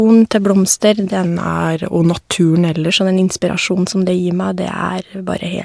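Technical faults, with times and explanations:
1.26–2.89 s, wrong sample rate: the speech slows to about 0.92 of normal speed and drops about 1.5 semitones, which points to audio recorded at 24 kHz being played at 22 kHz. Unlike pitch shifting or time-stretching, speed and pitch move together by one ratio.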